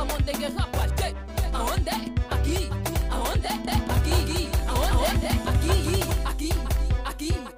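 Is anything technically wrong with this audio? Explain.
Yes: from 3.67 to 6.11 s there's a doubled audio track. A second full-band copy trails by about a fifth of a second at roughly equal loudness, with no decay or room tone, and it cuts in and out abruptly. Likely a second capture path or an out-of-step edit.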